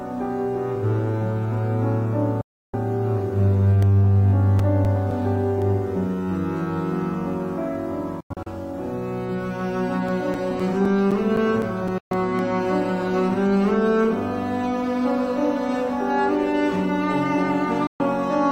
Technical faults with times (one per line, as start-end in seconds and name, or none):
2.41-2.74 digital broadcast dropout
3.82-5.62 CD scratch ticks
8.20-8.47 digital broadcast dropout
10.08-12.39 CD scratch ticks
11.98-12.11 digital broadcast dropout
17.87-18.00 digital broadcast dropout